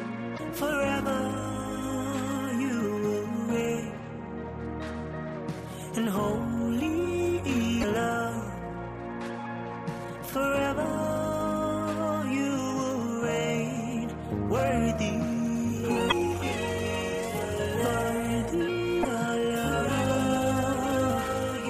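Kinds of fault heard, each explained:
Damaged data in a compressed stream: corrupted bytes make the decoder misread frames and lose sync until it locks onto the next valid frame header. Here this produces four short garbled blips, each about 0.04 s long, at 0.35, 7.80, 16.08 and 19.01 s.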